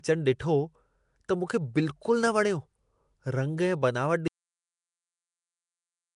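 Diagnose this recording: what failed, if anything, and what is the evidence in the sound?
Nellymoser compression, throughout: plainly audible codec damage, a rough hissy halo and smeared underwater quality, with nothing above 10.6 kHz. At the codec stage, likely Nellymoser Asao, which codes 256-sample blocks at two bits per sample and noise-fills starved bands; this fits about 44 kbps.

Cut-off end at 4.28 s: the speech stops mid-sound with no decay, and only silence follows. This is a buffer or storage failure: the final buffers were never written or played out, so the recording ends abruptly.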